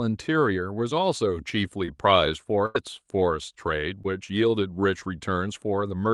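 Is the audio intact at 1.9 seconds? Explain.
No. From 1.85 to 1.90 s the speech briefly smears, a short wobble where a consonant can drop out. This is short concealed packet loss: about 20 ms arrived too late, so the decoder extended the preceding sound to cover the gap, then blended back.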